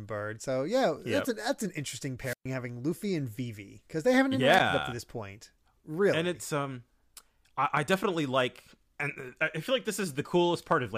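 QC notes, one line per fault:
2.22–2.46 s, wireless microphone squelch dropout: just after "an that's an interesting", a short swell of hiss gives way to a hole of near silence lasting about 124 ms. The radio link faded until the receiver's squelch cut the output.
4.50–4.60 s, wireless microphone squelch dropout: the same hiss-then-gap pattern, far shorter, with a mute of about 13 ms just before "up to this point". Again the signal weakened enough for the squelch to close briefly.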